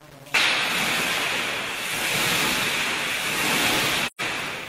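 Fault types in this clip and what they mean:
Low bit depth without dither: A coarse graininess rides on the sound for the whole clip and shifts in character as the material changes, quiet passages turning gritty or sputtering toward silence. The likely cause is rounding to around 6 bits with no dither, leaving error roughly 25 dB below the signal that tracks it instead of behaving as steady noise. A waveform zoomed in shows staircase steps; a spectrogram shows a raised, signal-dependent haze filling the gaps between components.
AAC frame loss with muting: From about 4.06 s to 4.21 s the sound fades down into a short hole and back up, with soft edges. The dropout spans about 128 ms, which fits three consecutive AAC frames being lost and zeroed by the decoder, with the overlapping windows smoothing the transitions. On a spectrogram this appears as a clean vertical blank band across all frequencies; the waveform tapers to flat and then swells back.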